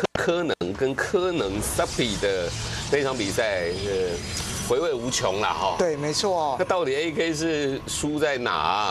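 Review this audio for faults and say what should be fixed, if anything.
Nothing needs fixing: the signal holds steady throughout, with its level, continuity and timing all intact.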